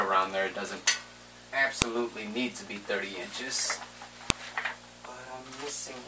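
Two sharp, loud clicks cut through the audio, one at 1.82 s and another at 4.30 s, each a brief snap that lands regardless of what the surrounding sound is doing at that moment. This is a file header played as audio: the clip appears to be built from separate WAV pieces joined end to end without stripping their headers, so at each join those few dozen header bytes are read as sample values and burst out as a click.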